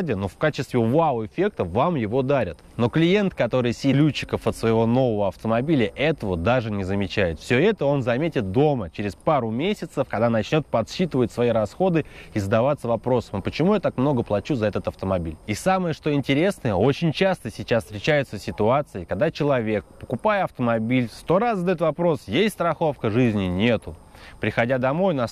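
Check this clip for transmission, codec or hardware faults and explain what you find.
One fault stands out, a stream segment skipped at about 3.93 s. The sound jumps abruptly forward there, with a brief blip at the join. It does not continue smoothly from where it was. The likely cause is a segmented stream losing one chunk. When a segment fails to load, the player moves straight on to the next one. A stretch of the programme then simply vanishes, and the two ends meet with a tiny click.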